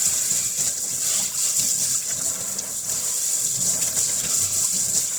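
From start to finish, the audio carries plainly audible Opus compression artefacts. The fault runs for the whole clip. The sound has a rough, grainy, noisy texture, and tonal parts lose their clean edges. There is little swirling. The cause is likely an Opus encoder in its music (CELT) mode starved of bits. Short of data, it fills bands with folded or noise-like content. The damage fits a rate near 16 kbps, with full bandwidth kept.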